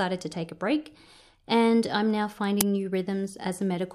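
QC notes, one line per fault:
2.61 s uninitialised buffer: a loud 5.8 ms burst of digital noise, leftover memory played before any audio was written, fitting a 256-sample buffer.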